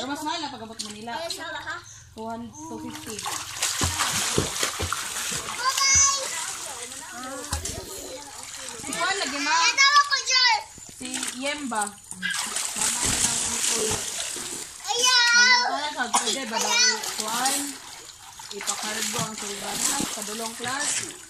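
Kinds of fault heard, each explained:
Processor overload crackle: a gritty, tearing crackle from 12.75 to 14.8 s and again from 19.58 to 20.04 s. The processor keeps missing buffer deadlines, and each miss replays a hard-edged scrap of old audio. The spacing fits buffers of around 10 ms.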